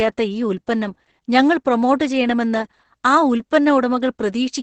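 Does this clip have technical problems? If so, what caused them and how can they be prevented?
Yes, the whole clip carries heavy Opus voice compression damage. The speech sounds muffled, a bit hoarse and slightly robotic, and nothing comes through above about 8.7 kHz. That fits Opus running in its SILK linear-prediction mode at a wideband setting and a very low bitrate, somewhere around 10 kbps, where the excitation gets coded so coarsely that the voice's texture breaks down. To prevent it, give the encoder more bitrate, ideally 24 kbps or higher for speech.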